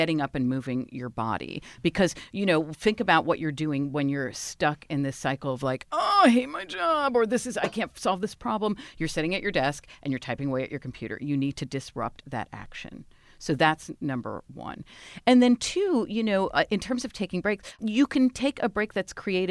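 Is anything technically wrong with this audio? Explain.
No, the speech signal comes through without any technical fault that a listener could pick out.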